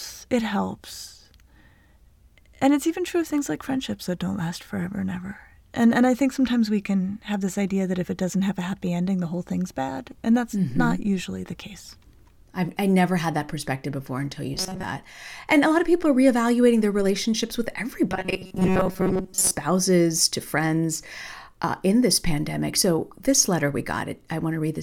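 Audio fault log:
14.54–14.84 s and 18.09–19.51 s, robotic sound from repeated short buffers: after "perspective before until you" and "reevaluating their relationships with", the speech becomes a rigid metallic buzz at 188 Hz, likely from a roughly 5.3 ms buffer being replayed for most of each span while fresh audio is skipped. On a spectrogram this shows as flat, evenly spaced harmonic stripes at multiples of 188 Hz. The waveform shows identical repeating cycles.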